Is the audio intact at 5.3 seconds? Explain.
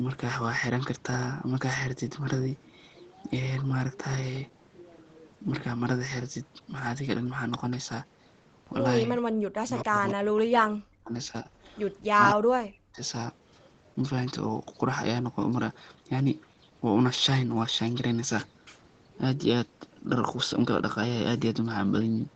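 Yes, the audio is intact at 5.3 seconds, with only the normal band limit of the call path, where nothing above 8 kHz comes through.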